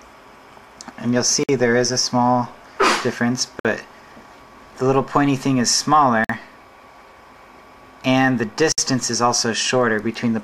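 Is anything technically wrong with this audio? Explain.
Yes. Four gaps at a join of encoded pieces break the continuous sound at 1.43, 3.60, 6.24 and 8.72 s, each lasting about 50 to 59 ms. The audio was encoded in separate segments and spliced without trimming, so each segment's encoder start-up delay and final-frame padding remain as silence. Each dropout has smeared edges, and the sound resumes exactly where it left off.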